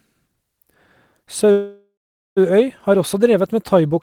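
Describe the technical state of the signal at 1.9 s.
At 1.9 s the signal is inside a call audio freeze that runs from 1.51 to 2.39 s. The last sound before 1.51 s is prolonged as a fading buzz or hiss and then drops to silence for roughly the final 0.43 s of the span. The likely cause is a jitter buffer that ran dry while packets were delayed in transit. When the audio resumes it continues from where it stopped, with nothing lost but about 0.85 s of added delay.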